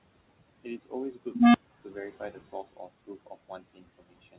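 Throughout the clip, noise suppressor artifacts appear: the suppressor pulls down bands it judges to be steady room noise by about 17 dB, so the background sinks between words and rises back beneath speech. The room noise itself sits about 19 dB below the voice, and nothing is heard above 4 kHz, which fits a narrowband call path.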